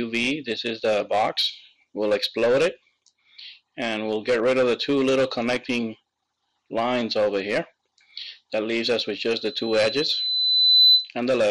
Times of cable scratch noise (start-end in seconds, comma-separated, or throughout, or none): none